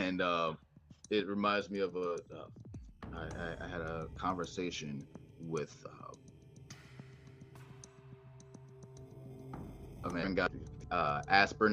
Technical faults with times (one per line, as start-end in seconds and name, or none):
none